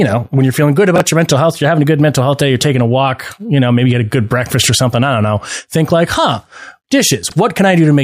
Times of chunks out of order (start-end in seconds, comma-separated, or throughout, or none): 0.96-1.00, 7.23-7.32